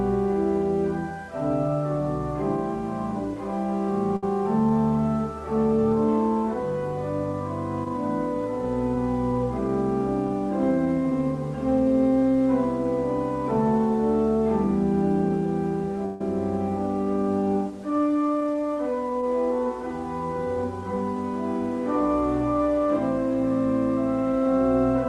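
The audio has two short hold-ups. At 4.16 to 4.24 s there is a short stall from a late packet: the jitter buffer ran dry and the last sound was stretched for about 61 ms until the packet arrived. Nothing is lost, but everything after lands 61 ms later. On a spectrogram this looks like a brief smeared, horizontally streaked patch, and the waveform shows a slightly dipped, repetitive stretch. At 16.06 to 16.21 s the sound freezes into a buzzy continuation for about 144 ms without dropping to silence, then resumes exactly where it stopped. This is a call audio freeze, likely from packets held up in transit that emptied the jitter buffer. It shows as a wider band of flattened, repeating texture on the spectrogram, with a fading, periodic envelope in the waveform. Throughout, the WebRTC call path's Opus coding leaves content above about 12 kHz cut off, which shows as an empty band at the top of the spectrogram.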